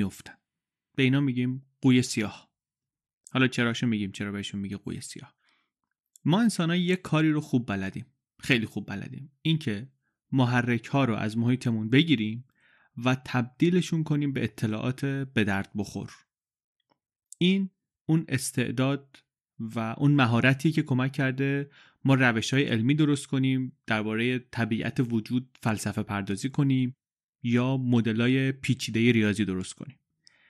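The speech sounds dull and gurgling throughout. Likely MP2 compression: starved upper sub-bands drop out, fitting a rate near 80 kbps.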